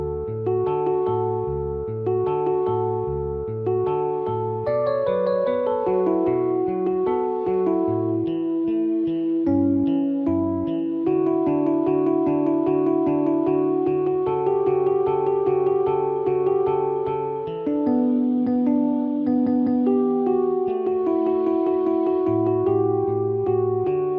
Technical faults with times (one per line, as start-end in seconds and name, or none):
none